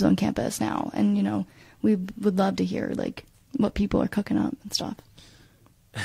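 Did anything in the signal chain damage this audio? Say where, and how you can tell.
No, nothing along the chain has left a mark on this speech recording that I can hear, so there's no stage to point to.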